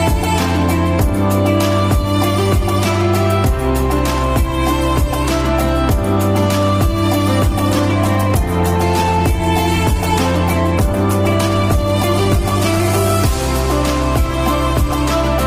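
From 7.53 s to 13.39 s the sound turns coarse and watery, losing its clarity and some of its top end, then clears again. This is a call bitrate drop: the connection's bandwidth estimate fell, and the encoder was pushed from 32 kbps down to 15 kbps, staying at that floor for about 5.8 s. With under half the bits, detail is quantised far more roughly and the upper frequencies are trimmed, which produces the duller, grainier texture until the rate recovers.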